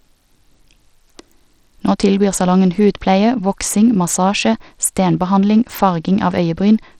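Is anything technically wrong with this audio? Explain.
Yes. Throughout this speech clip the treble thins and flickers, with gritty noise, and nothing sounds above 18.8 kHz. Likely Bluetooth SBC compression, starving the top sub-bands at a low bitrate.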